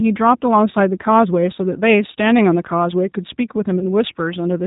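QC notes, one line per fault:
throughout: G.729 codec damage is plainly audible. The band stops at 4 kHz, so the speech sounds muffled and slightly rough. It is rebuilt from a vocal tract filter, a pitch predictor and a few pulses per frame. That gives a synthetic edge that fits 8 kbit/s G.729A.
3.79 to 3.84 s: VoIP packet loss concealed by the speech codec. About 20 ms of speech is missing, which points to one lost packet. The decoder stretches its last pitch and filter into a brief buzzy tone or coloured noise that fades. The speech stays weak or distorted briefly afterwards while the frames rebuild.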